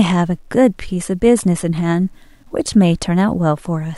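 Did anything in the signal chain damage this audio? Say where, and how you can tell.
Yes. The speech was likely truncated to about 10 bits without dither in a sample-format conversion. Throughout the clip, a grainy distortion tracks the voice, roughly 45 dB below it. Quiet passages turn gritty and the faintest detail sputters between steps, the mark of low bit depth without dither.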